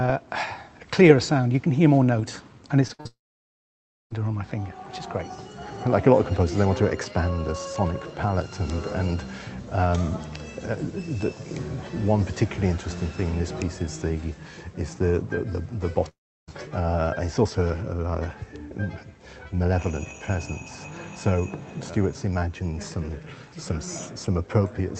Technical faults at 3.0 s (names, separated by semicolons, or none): short concealed packet loss; burst of packet loss; long network dropout